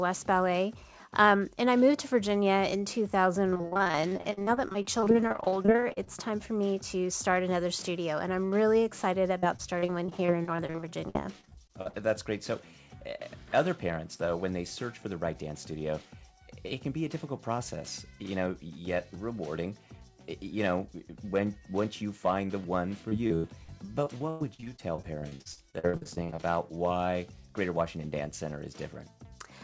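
Repeated packet loss (robotic sound) occurs from 3.50 to 6.09 s, 9.39 to 11.95 s and 23.09 to 26.45 s. Audio packets kept going missing, and each hole was patched by extending the last sound, so these stretches turn choppy, with pieces missing and holes up to 102 ms in the last. Above 8 kHz the audio is empty throughout, which fits a G.722 call codec.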